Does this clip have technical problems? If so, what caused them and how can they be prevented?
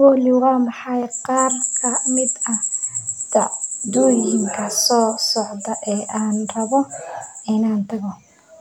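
No, there are no faults.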